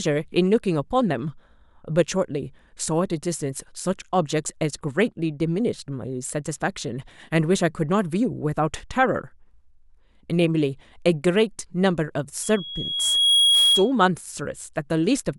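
A speech recording with loudspeaker feedback squeal from 12.43 to 13.92 s. A single tone near 3.3 kHz swells over roughly a second until it sits a few decibels above the speech. The microphone is hearing its own loudspeaker, and the loop gain exceeds one at that frequency.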